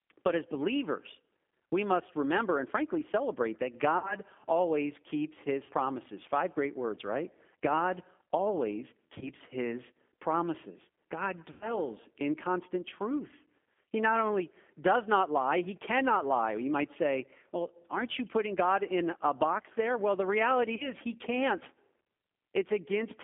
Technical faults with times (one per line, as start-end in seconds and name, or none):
0.00-23.23 G.729 codec
3.98-4.15 VoIP packet loss concealed by the speech codec
5.64-5.71 VoIP packet loss concealed by the speech codec
9.18-9.29 VoIP packet loss concealed by the speech codec
11.52-11.79 VoIP packet loss concealed by the speech codec
20.75-20.89 VoIP packet loss concealed by the speech codec